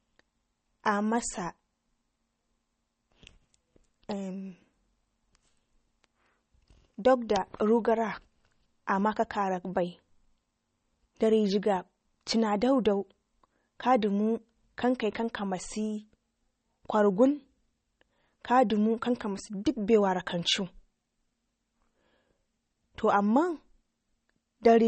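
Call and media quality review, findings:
Watery, swirly speech across the whole clip, smeared consonant onsets, metallic chirp on s sounds, nothing above 8.4 kHz. Likely MP3 compression at a starved bitrate, fitting roughly 32 kbps: treble hard-cut, weak frequency lines flickering on and off between frames.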